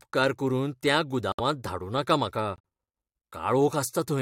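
Speech with two corrupt frame muted holes: abrupt silence at 1.32–1.40 s after "करून त्या" and 2.56–2.60 s after "धाडूं नाका म्हाका". Rejected compressed frames are replaced by silence, not concealed, and timing holds.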